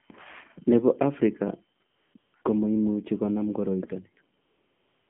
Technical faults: AMR narrowband mobile codec; AMR comfort noise

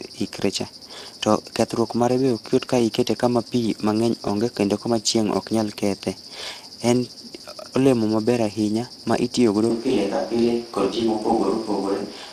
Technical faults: Speex codec; switch to a distant microphone

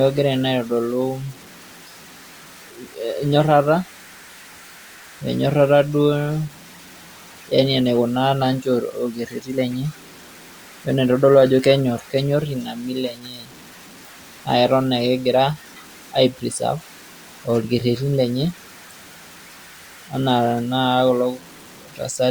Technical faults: low bit depth without dither

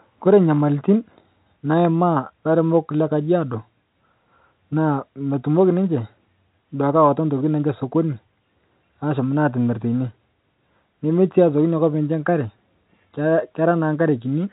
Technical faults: none

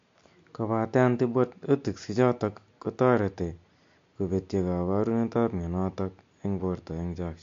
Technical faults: MP3 compression

